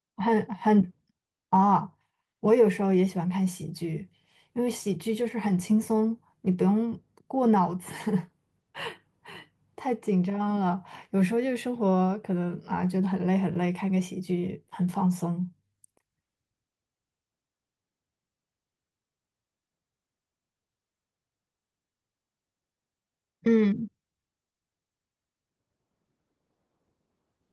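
A speech recording with no technical faults to report. Nothing in it calls for a time stamp or a cause.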